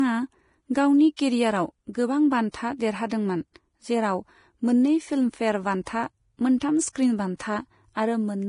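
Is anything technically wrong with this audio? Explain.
Yes. Throughout the speech, heavy lossy coding is at work, likely Vorbis compression at a low setting that fits a bitrate of around 30 kbps. The encoder keeps only a smooth outline of the spectrum and quantises the detail above it very coarsely, removing everything above 10.6 kHz. The result is a dulled top end, with hiss and graininess where fine treble texture should be, roughened tonal parts and softened consonant onsets.

Pre-echo occurs twice, from 1.16 to 1.19 s and from 2.51 to 2.54 s, spreading about 25 and 28 ms ahead of a sudden attack. The codec distributes its quantisation noise across an entire transform block, so noise scaled for the loud onset also fills the quiet gap just before it. Each of these attacks is preceded by a brief hiss and sounds smeared rather than crisp.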